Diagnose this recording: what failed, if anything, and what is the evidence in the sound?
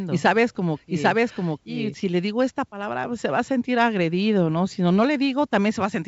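For the first 1.94 s the speech is heard twice: a second, full-band copy at roughly the same loudness trails the original by about 0.7 s. It is already running when the clip opens and cuts out abruptly at 1.94 s, with no decay or room colour. That is a doubled audio track, likely from the same signal reaching the mix a second time through a slower capture or buffer path, or an edit holding two offset copies. The G.722 wideband coding at 64 kbit/s carries both copies cleanly.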